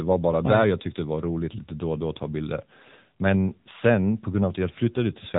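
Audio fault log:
Throughout, AMR narrowband mobile codec: the speech has plainly audible codec damage, with a buzzy, synthetic edge that fits one of AMR-NB's middle modes, near 8 kbps. The codec rebuilds each 20 ms frame from a vocal-tract model driven by a few pulses, so fine detail is replaced by coarse approximation. On a spectrogram everything stops at a flat ceiling near 3.8 kHz, and the harmonics below it look smeared and blocky frame to frame.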